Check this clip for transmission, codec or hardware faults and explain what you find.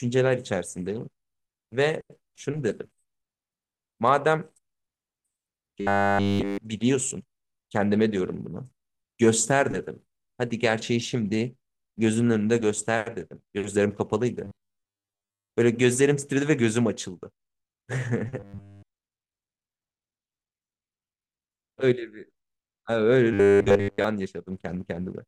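Robotic sound from repeated short buffers occurs at 5.81–6.59 s, 14.44–15.49 s, 18.40–18.90 s and 23.33–24.04 s. Likely caused by late audio, each gap is filled by looping a 10 ms buffer, which imposes a 100 Hz metallic buzz. The speech becomes a rigid buzz, fully so in the first and third events and mostly so in the others.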